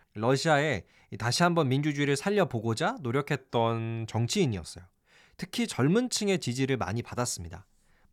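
Speech, with a drift correction step from 3.35 to 4.28 s: playback slows by 6.2% and pitch drops 112 cents, then snaps back, likely a clock-matching resampler refilling its buffer. Unlike tape wow, the shift is one flat step, not a continuous wobble.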